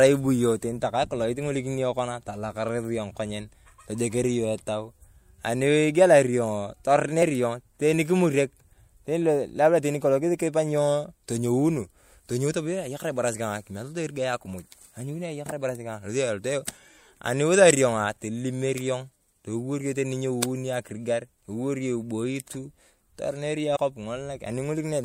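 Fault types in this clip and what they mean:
Compressed frames skipped: whole frames of the encoded speech never reached playback, either lost from the file or rejected by the decoder as corrupt, so the audio leaps forward each time. At 7.21 s roughly one frame drops out, at 13.33 s about two, and at 23.75 s about three, losing roughly 20, 50 and 70 ms, steps that fit 24 ms frames.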